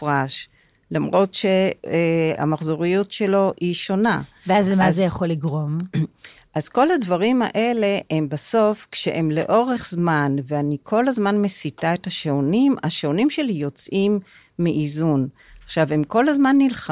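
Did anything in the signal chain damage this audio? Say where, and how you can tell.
No, nothing in this speech recording points to damage at any stage of the signal chain. There is no audible event to place in time, so no stage needs to be singled out.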